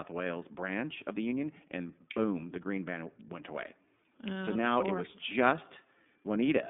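Speech, carried throughout by the iLBC codec, a narrowband VoIP coder. The audio sits inside a telephone band of roughly 200 Hz to 3.6 kHz, with nothing above 3.7 kHz. Each 30 ms frame's excitation is coded independently of the previous frame, which gives the plainly audible rough, slightly synthetic texture and fits iLBC's 13.33 kbps mode.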